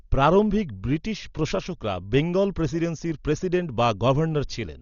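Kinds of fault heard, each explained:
Dolby Digital compression: likely a starved encoder, consistent with about 40 kbps, dropping everything above 7 kHz and noise-filling bare frequency lines, so speech sounds dull with rough, fluttering grit.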